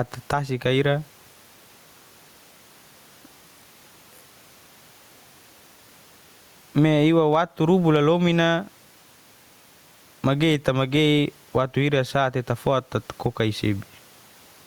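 Gain pumping runs throughout the speech. The level ducks by around 10 dB under every loud syllable, with room noise about 43 dB below the speech. This squashed, breathing level likely comes from excessive input gain driving a fast limiter.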